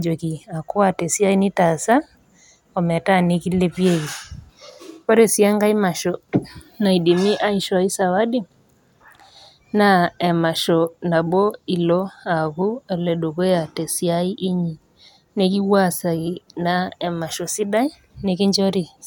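Nothing stood out as a technical fault on listening to this speech recording.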